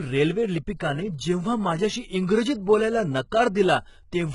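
HE-AAC compression runs through the whole speech recording and is likely the cause of the heavy damage heard from start to finish. Only the lower band appears to be coded properly. The treble is rebuilt by copying lower bands upward under a coarse envelope, so the top end sounds synthetic, with nothing above 11 kHz. The s sounds turn gritty and metallic, and harmonics fail to align across the crossover, which fits a very low bitrate of around 12 kbps.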